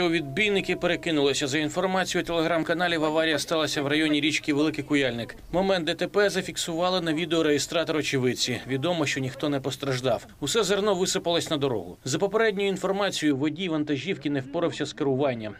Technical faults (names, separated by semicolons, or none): de-emphasis applied wrongly